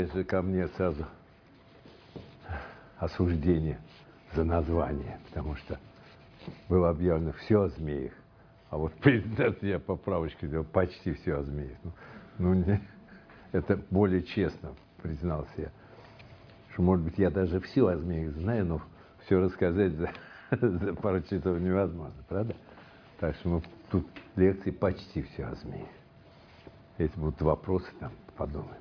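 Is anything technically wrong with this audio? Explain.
No, the signal shows no technical faults anywhere in the recording.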